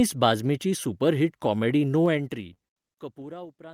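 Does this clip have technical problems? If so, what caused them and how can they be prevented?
Yes. Short stalls from a late packet hold the speech at 2.53–2.58 s and 2.68–2.78 s. While the jitter buffer sat empty, the last sound was stretched by 23 ms and then 86 ms. Unlike packet loss, nothing is skipped, and playback resumes exactly where it paused. A deeper or adaptive jitter buffer prevents this.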